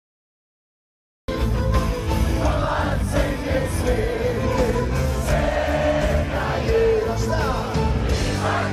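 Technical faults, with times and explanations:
0.00 to 1.28 s, cut-off start: the clip opens on pure digital silence, then at 1.28 s the sound appears already under way, with no attack and no rising fade. Capture began after the sound had started, so its beginning was never recorded. Unlike a slow fade-in or a noise gate opening, nothing ramps up. Unlike a dropout, nothing came before the gap, and the silence is digital silence rather than room noise.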